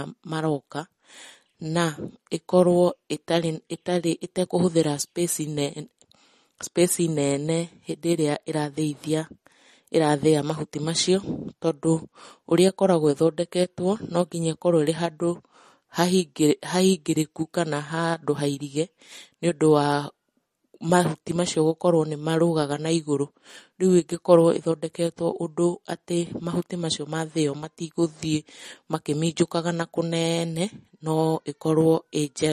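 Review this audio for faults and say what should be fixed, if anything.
MP3 compression damage runs through the whole clip and is plainly audible: nothing is present above 13.6 kHz, and the speech has a watery, swirling texture, with s sounds turning metallic and consonant onsets smearing. The likely cause is a lossy MP3 encode at a low bitrate, which fits something around 40 kbps. Short of bits, the encoder cut the treble at a fixed frequency and zeroed quieter frequency lines, which then flicker on and off between frames. To prevent it, keep an uncompressed or lossless master and, if MP3 is required, encode once from that master at a much higher bitrate.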